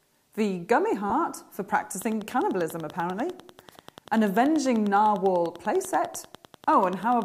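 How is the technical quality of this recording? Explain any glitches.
Two distinct faults are audible: one brief smear early on, then a steady ticking through most of the rest.

Lost LE Audio frames, 1.10 to 1.12 s: about 20 ms of audio went missing, which fits two 10 ms LC3 frames. The decoder filled the gap by replaying the last spectrum with randomised phase signs, so the sound turns briefly into a grainy, noisy smear rather than cutting to silence. The gap is too short for the concealment to fade out. What sets it apart from a click is that it is a single smeared moment that blurs tone, not a sharp transient.

Train of clicks, 2.02 to 7.23 s: a regular series of similar pulses at about 10.2 per second, roughly fifty in all, with peaks a few dB above the surrounding signal. It is heard as even ticking laid over the sound and continuing through pauses. The likely cause is electrical interference or a faulty connection or power supply injecting pulses. 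Unlike the frame loss, the clicks are near-identical, evenly spaced spikes that leave the sound between them intact.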